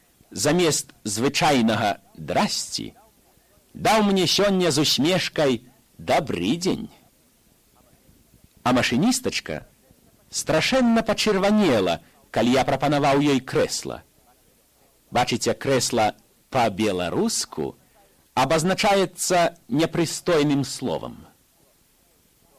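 No faults to report: no dropouts, level jumps, distortion or timing problems anywhere in the recording.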